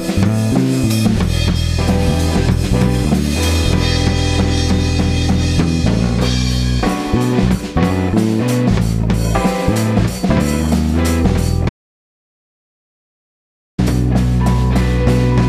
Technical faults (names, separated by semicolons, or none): audio dropout to silence